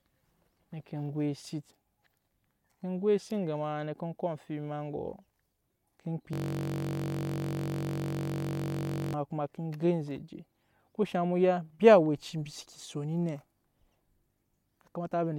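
Speech, interrupted from 6.33 to 9.14 s by a steady buzz at about 46.9 Hz: a system hang loop, replaying one 21.33 ms fragment, which fits a 1024-sample ring buffer.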